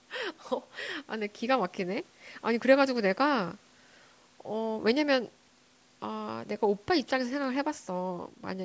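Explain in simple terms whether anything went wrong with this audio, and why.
Nothing went wrong here: the speech just sounds like it came through a call's microphone processing, which trims away the very deepest bass and keeps everything below 8 kHz, and that's exactly how it's supposed to behave.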